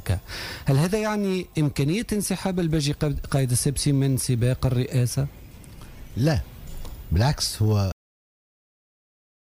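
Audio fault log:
7.92–9.43 s, cut-off end: the audio stops abruptly at 7.92 s, in the middle of a sound, and the remaining 1.5 s are digital silence with no decay or tail. The final buffers of the stream were never written to the output or played out, so the signal doesn't fade or ring down. The waveform simply ends where the last delivered block finished, and everything after that point is empty.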